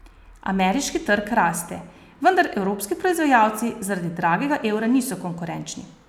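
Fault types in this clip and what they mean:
No technical faults can be heard anywhere in the audio.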